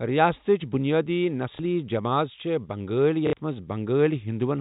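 Packet loss with the last packet repeated occurs at 1.56 to 1.59 s (30 ms) and 3.27 to 3.33 s (60 ms), which fits 30 ms packets. The longer gap buzzes briefly at about 33 Hz, over telephone-band audio.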